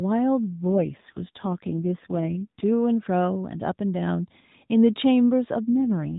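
From 0.47 to 2.64 s, and again from 5.74 to 6.18 s, the speech turns rougher and buzzier, which points to an AMR rate drop from 12.2 to 4.75 kbps. The spectrogram keeps its 4 kHz ceiling and the waveform shows no gap, but the harmonics smear.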